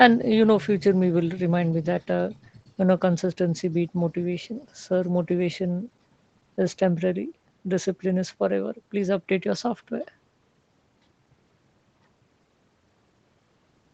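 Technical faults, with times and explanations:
No technical faults detected.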